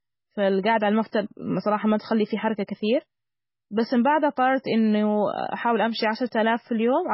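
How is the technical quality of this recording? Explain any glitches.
The technical quality is poor, with heavy damage throughout. From start to finish the speech carries likely MP3 compression artefacts. Nothing remains above 5.6 kHz, where the encoder cut the treble. Weak frequency lines drop in and out between frames, giving a watery, smeared sound. The damage fits a very low bitrate, around 16 kbps.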